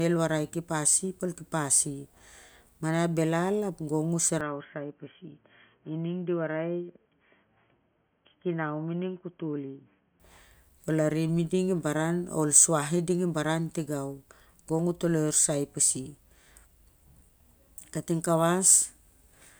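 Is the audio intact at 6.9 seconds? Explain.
No, an apparent input switch to a poorer device runs from 4.41 to 10.2 s, just after "belal ap gong u". The speech likely moved to a narrower-band microphone, so it turns dull with nothing above 3.3 kHz, drops about 5 dB, and carries faint new background noise.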